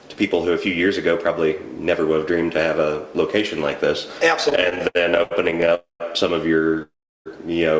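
From 4.50 to 5.73 s the sound breaks into repeated stalls (stutter): seventeen short gaps, none longer than 78 ms, where the receiver's jitter buffer kept running dry and it stretched the last sound to cover about 0.33 s. Nothing is lost, but it drags and judders, unlike a single long hold.

Two call audio freezes follow, at 5.75 to 6.02 s and 6.82 to 7.28 s. Each is one continuous stop of 254 ms and 433 ms, the held sound fading into silence for 150 ms and 370 ms, then resuming exactly where it halted, likely because packets were held up in transit. The band-limited G.722 sound, with nothing above 8 kHz, is audible throughout.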